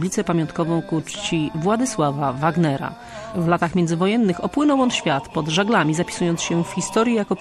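Throughout the clip, the audio was likely squeezed through MP3 compression at a low bitrate, fitting about 64 kbps. Starved of bits, the encoder drops weak frequency lines frame to frame, leaving a watery swirl and smeared attacks.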